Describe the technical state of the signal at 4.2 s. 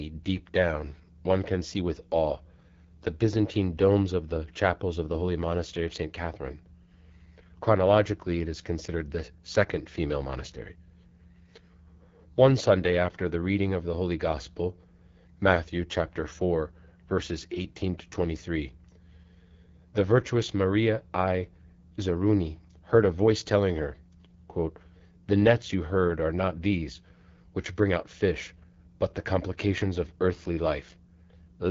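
At 4.2 s the speech is passing through the AMR wideband (HD Voice) codec, which runs for the whole clip at a low rate, consistent with its 8.85 kbit/s mode. The vocal-tract model gets too few bits, so the speech sounds plainly rough and raspy, with nothing above 7.4 kHz.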